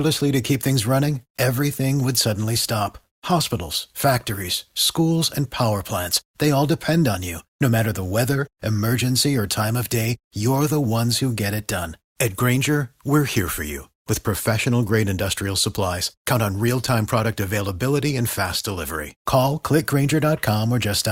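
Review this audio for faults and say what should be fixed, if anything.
Nothing needs fixing: no technical faults can be heard anywhere in this speech recording. No correction or repair is called for.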